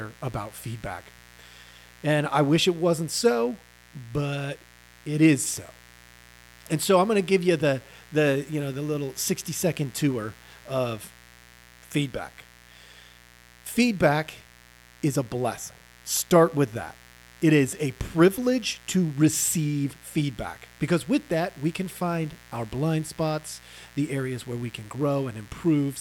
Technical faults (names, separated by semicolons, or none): mains buzz